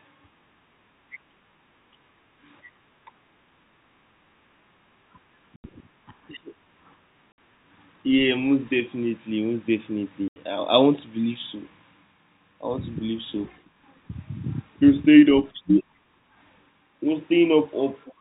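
The clip is speech on a G.711 telephone-band path. It has packet loss filled with silence. Hard gaps cut in at 5.56 s for 80 ms, 7.32 s for 60 ms and 10.28 s for 80 ms. The lengths fit whole 20 ms packets dropped and replaced by silence.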